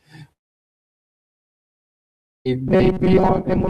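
From 0.32 s to 2.46 s the stream likely suffered a long network dropout: about 2.1 s of speech never arrived and was never recovered. The gap is almost entirely silence, and speech resumes at 2.46 s with the missing stretch simply gone.

From 2.68 s to the end at 3.70 s, new audio likely arrived too seldom, so a very short buffer was replayed in its place for most of that stretch. This gives robotic sound from repeated short buffers: a rigid, metallic buzz at a fixed 188 Hz, which fits a buffer of about 5.3 ms, still loosely tracking the speech.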